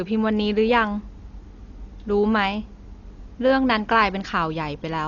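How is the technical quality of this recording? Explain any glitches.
The technical quality is poor throughout the speech. The sound is dull and rough from start to finish, likely from Dolby Digital compression. Nothing is present above 6.9 kHz. The encoder seems to have narrowed the band and starved many frequency lines of bits. The decoder fills those lines with dither noise. That leaves a rough, fluttering haze around voiced tones. The damage is heavy and fits a very low bitrate, around 40 kbps.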